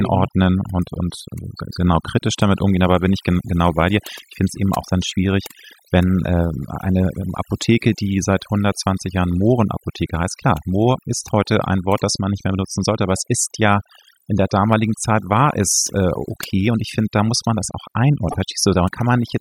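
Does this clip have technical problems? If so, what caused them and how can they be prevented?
Yes. Overdone noise removal runs throughout: over-aggressive noise reduction mutes bands near its noise estimate, leaving twinkling specks in near-silence, unlike steady codec smearing. Gentler reduction settings prevent it.

Damaged data in a compressed stream causes a brief blip from 18.30 to 18.36 s, after "muss man das auch". The decoder loses frame sync and searches for the next frame header, unlike a repeating buffer dropout. Checksummed, reliable transfer prevents it.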